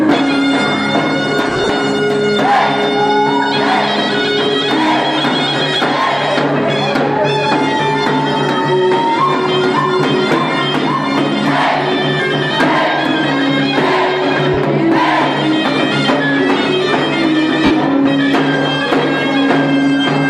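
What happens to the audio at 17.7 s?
Around 17.65 to 17.71 s there's a burst of lost LE Audio frames: the LC3 decoder repeats the last spectrum with scrambled signs, so the sound smears noisily and starts fading.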